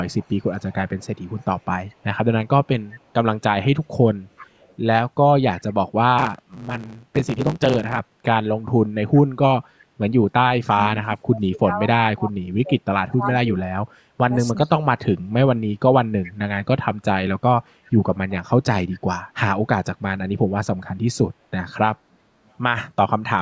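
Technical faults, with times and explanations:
0.05–2.04, 2.89–3.12, 4.37–4.75, 5.6–5.73, 9.14–9.18, 16.23–16.32, 18.29–18.35 s, echo leak: faint speech copies trailing 375 ms behind, roughly 20–35 dB down, likely from loudspeaker echo escaping cancellation. On the spectrogram they appear as weak, shifted duplicates of the speech formants.
10.73–15.33 s, speech suppressed in double talk: the speech dips by up to about 30 dB, for roughly 3 s in total, likely from the canceller attenuating while both sides talk. The waveform shows gouged, uneven gaps.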